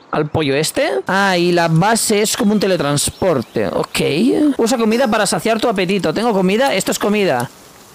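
From 2.70 s to the end at 7.95 s, the audio turns grainy with low bit depth without dither: a rough distortion that rises and falls with the sound, with quiet passages sputtering or dropping out. The likely cause is rounding to very few levels, consistent with about 7 bits, leaving error roughly 35 dB below the signal. The waveform shows visible stair-steps and near-silent runs in quiet stretches, and the spectrogram shows signal-following broadband fuzz rather than a steady noise floor.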